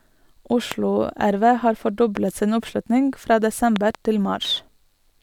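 A voltage step or pulse, likely from a plug, switch, static or driver glitch, gets added to the signal at 0.72 s, 2.17 s and from 3.76 to 3.97 s. Each is a loud pop about 15 dB above the speech, a double pop in the last case, with the speech continuing underneath.

From 4.42 to 4.65 s the processor misses its deadlines about ten times, with buffers of around 5 ms. Each missed buffer is skipped and leaves a hard-edged gap, so this processor overload crackle sounds like gritty tearing over the speech until the load clears.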